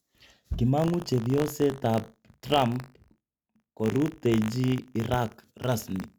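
From 0.76 s to the end, the speech carries buffer tearing. The writer and the reader of a ring buffer have slipped out of step and now cross inside every period. A tiny sliver of each buffer still holds audio from about 40 ms earlier, spliced in with hard joins. Those joins repeat at 50 Hz, which fits a 20 ms buffer period. The result is a steady robotic buzz riding on the speech, present only while sound plays.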